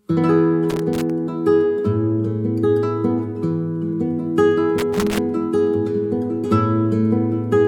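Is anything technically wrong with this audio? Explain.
Yes. Loose connector crackle occurs twice, from 0.70 to 1.10 s and again from 4.78 to 5.19 s, each burst lasting about 0.4 s. A worn or dirty contact somewhere in the signal path is intermittently making and losing connection as it shifts, so the audio is chopped on and off in rapid, uneven succession, with sharp pops where any DC on the line jumps. The result is an irregular, scratchy crackle laid over the sound.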